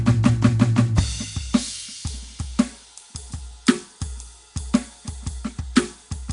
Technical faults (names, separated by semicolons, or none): Nellymoser compression